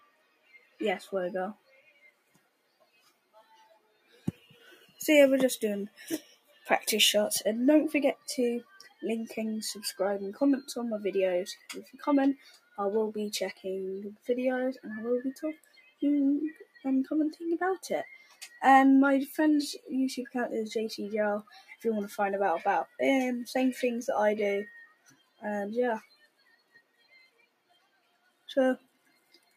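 Across the whole clip the level pumps and breathes, with sustained parts sinking while sharp onsets punch through, so the audio thins and flutters rather than holding steady. This is a noise suppressor applied to music or sounds: a speech-tuned suppressor treats steady tones, ambience and decaying tails as noise and turns them down, swinging the gain by something like 20 dB as it decides what to keep.

The sound cut by the noise suppressor is clearest in seven stretches: 0.0 to 6.68 s, 8.15 to 9.03 s, 11.56 to 14.29 s, 15.35 to 16.84 s, 18.17 to 18.58 s, 21.43 to 21.84 s, and 24.85 s to the end. In each, held or fading material drops away, by about 18 dB at its worst in the first and last stretches, about 17 dB at 11.56 and 15.35 s, and about 12 to 14 dB in the shorter ones. Most of the opening and closing stretches are pulled down, while the brief middle dips last about a second or less.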